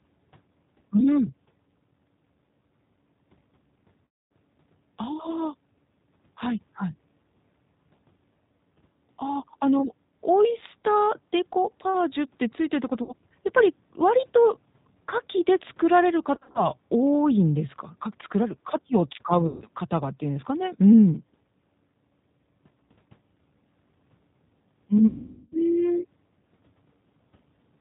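The whole clip carries plainly audible G.729 codec damage at 8 kbit/s. The speech sounds rough and synthetic. It is rebuilt from a coarse vocal tract model and sparse pulses, and nothing above 4 kHz survives.

VoIP packet loss, concealed by the speech codec, hits at 4.05, 13.03, 16.35, 19.47 and 25.07 s. The gaps run about 260, 60, 150, 140 and 450 ms. At 16.35 s they come as short scattered dropouts. Each gap smears into a fading buzzy tone or coloured noise, and the speech stays weak briefly afterwards.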